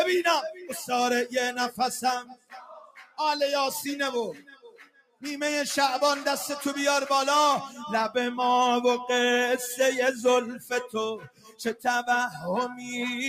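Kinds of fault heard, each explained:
Noise suppressor applied to music or sounds: A suppressor tuned for speech stays active across the whole clip and treats sustained tones, ambience and reverberant tails as noise. Its gain keeps moving, with a level swing of around 10 dB, so the sound pumps and thins as it holds or decays while sharp onsets pass mostly intact. Unlike a compressor, which tracks loudness, this reacts to how steady the content is, not how loud.
Sound cut by the noise suppressor: At specific moments the suppressor clamps down much harder than its background pumping. The level sinks by about 20 dB from 2.23 to 3.19 s and from 4.34 to 5.23 s, by about 13 dB from 10.59 to 10.95 s, and by about 21 dB from 11.18 to 11.85 s. Held or fading material is pulled down or has its decay truncated. Unlike a dropout, the sound dips deeply but does not vanish, and attacks still poke through.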